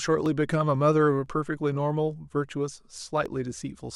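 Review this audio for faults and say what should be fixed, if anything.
Clock drift buffer slips give a short click in the speech about every 1.0 s, from 0.26 s to 3.26 s, roughly four times. Two unsynchronised clocks, likely several hundred ppm apart, force a few dozen samples to drop or repeat. Lock both devices to one shared clock.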